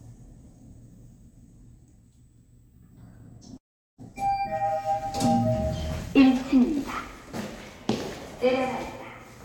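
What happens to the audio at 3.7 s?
A call audio freeze runs from 3.57 to 4.00 s. Packets were likely held up. The last sound fades into silence. Sound then resumes, delayed about 0.41 s, with nothing lost.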